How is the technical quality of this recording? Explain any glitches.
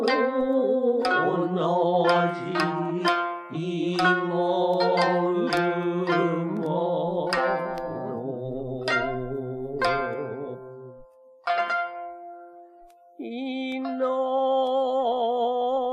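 Two tiny dropouts stand out. Both are a block of digital silence, at 6.57 s and 13.72 s, lasting roughly 0.5 ms and 0.2 ms. For a few samples the output was simply zeros, probably because the buffer wasn't filled in time. Since the signal drops to nothing and jumps straight back without any fade, each edge is a hard discontinuity. At these lengths you don't hear a gap at all, just a sharp little tick.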